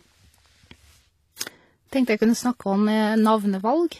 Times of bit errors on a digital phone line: none

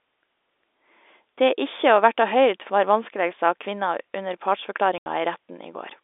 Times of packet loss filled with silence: 4.98-5.06

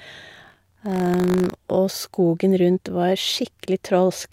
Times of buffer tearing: 0.32-1.54

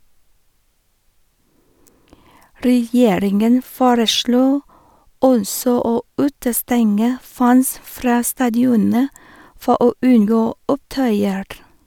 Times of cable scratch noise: none

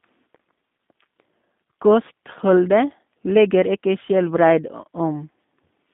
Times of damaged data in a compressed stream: none

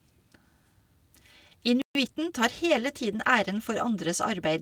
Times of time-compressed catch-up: 1.95-2.47

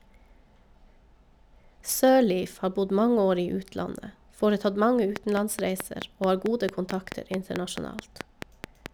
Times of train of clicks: 5.16-8.87

